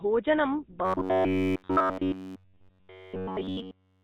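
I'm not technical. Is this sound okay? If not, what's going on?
No. Throughout, the speech sounds buzzy and gravelly, like an old mobile phone call, with nothing above about 4 kHz. That's the GSM full-rate codec, an early phone-network format that rebuilds the voice from a simplified model and discards the higher sounds.

From 0.85 s to the end at 4.03 s, the voice turns into a rigid, metallic buzz pitched at about 94 Hz. This is robotic sound from repeated short buffers, likely caused by audio arriving too slowly, so a snippet of roughly 11 ms is replayed over and over instead of fresh sound.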